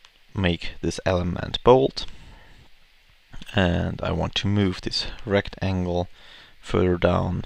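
No technical faults can be heard anywhere in the audio.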